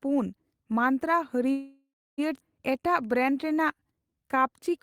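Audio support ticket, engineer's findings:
Call audio freeze, 1.51 to 2.20 s: the last sound is held as a fading buzz or hiss, then about 270 ms of silence, 0.67 s inserted in total. Likely packets delayed and the jitter buffer ran empty. Resumes where it stopped, nothing lost, unlike a dropout.

Skip ahead, 2.40 to 2.43 s: playback jumps forward with almost no gap, roughly half a second of audio missing, both sides butted together. Audio dropped in transit or by an overflowing jitter buffer. Unlike the freeze, content is lost and no filler is heard.

Jitter buffer slow-down, 2.73 to 4.79 s: sound runs at 88% speed with pitch unchanged, drawn-out sounds, 263 ms added. Receiver repeating single pitch periods to rebuild its reserve. Pitch holds steady, so not a clock or resampling error.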